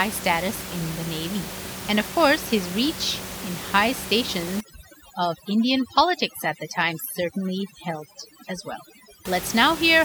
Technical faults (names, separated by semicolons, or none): overdone noise removal